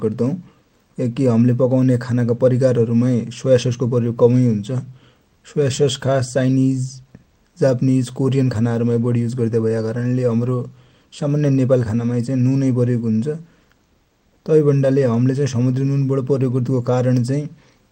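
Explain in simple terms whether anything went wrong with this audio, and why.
Nothing went wrong; no technical faults can be heard.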